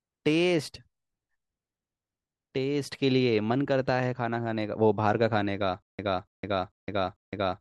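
From 5.82 s to the end, a stutter with silent gaps: a 284 ms fragment of speech repeats four times, each followed by 163 ms of digital silence. A stalled player likely replayed its last buffer at each retry. The dead gaps distinguish it from a seamless loop.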